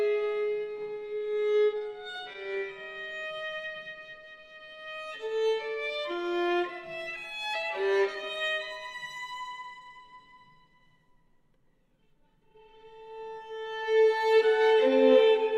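From 0.99 to 3.58 s there are repeated stalls (stutter): packets arrived late, the jitter buffer kept running dry, and the receiver extended the last sound through about two dozen short gaps, none longer than 19 ms, totalling 242 ms. Nothing is lost, but the audio drags and catches.

Overlapping this, from 3.27 to 4.67 s, a jitter buffer slow-down sets in. To rebuild its reserve, the receiver repeated single pitch periods, adding 173 ms and playing at 88% speed. The sound stretches out at unchanged pitch, with drawn-out sounds.

From 6.56 to 8.37 s comes a jitter buffer speed-up. The buffer held more than its target, so the receiver cut short pitch-period pieces, removing roughly a fifth of a second and running at 110% speed. Pitch stays put, while the audio sounds hurried.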